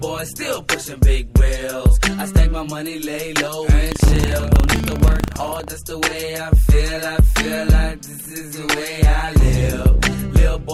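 From 3.88 s to 5.68 s there is buffer tearing: the application filling the ring buffer and the hardware draining it have drifted out of step, so their positions cross inside every period. A small slice of each period, roughly 5 percent, is stale audio from around 150 ms earlier, spliced in with hard edges on both sides. The result is a steady robotic buzz at 25 Hz, which points to a period of about 40 ms.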